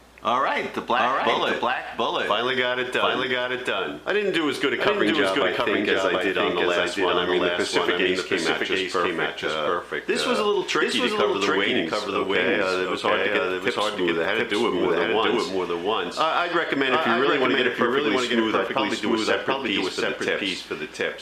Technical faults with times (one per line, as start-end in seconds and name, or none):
0.00-21.21 doubled audio track